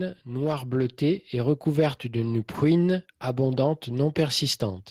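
From 0.26 to 2.54 s, automatic gain rising: the gain control judged the input too quiet and lifted it by about 6 dB, swelling speech and background together.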